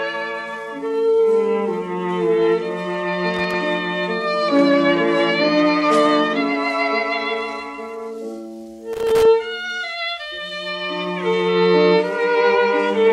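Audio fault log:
3.34–3.54 s and 8.93–9.25 s: loose connector crackle. Two short bursts of irregular crackle and scratching cut through the sound, the first lasting about 0.2 s, the second about 0.3 s. A worn or dirty contact is making and breaking many times as it shifts. Each break chops the signal off and on again. Any DC on the line turns those jumps into pops, giving the ragged, scratchy texture.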